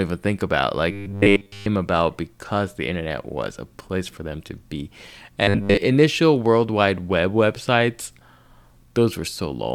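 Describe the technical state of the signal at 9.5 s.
At 9.5 s the signal is intact, with no dropout, clipping, glitch or other fault audible at that moment.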